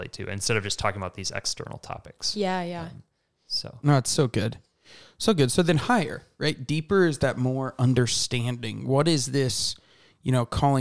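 Nothing technical goes wrong anywhere in this speech recording, so there's no fault to point to at any moment.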